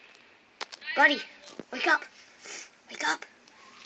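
No technical faults are audible; the sound has come through a call path whose top end stops at about 12 kHz, as expected for that route.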